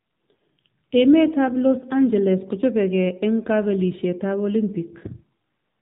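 Throughout the clip, the speech has passed through the AMR narrowband mobile codec, the AMR-NB coder used on 2G and 3G calls. It rebuilds the voice from a vocal-tract model excited by sparse pulses, and the damage is plainly audible, which fits one of its lower modes, around 7.4 kbps. Nothing above 4 kHz survives, so the speech is dull and boxy, and the thin pulse excitation gives it a buzzy, synthetic edge.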